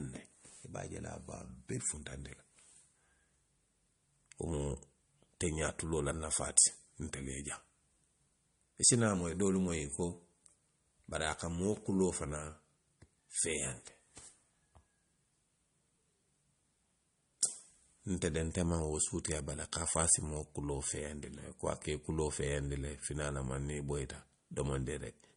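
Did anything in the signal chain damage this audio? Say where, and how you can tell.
Yes, at the codec stage. Throughout, the speech sounds watery and nothing is heard above 10.6 kHz. This is likely MP3 compression at a low bitrate, around 40 kbps.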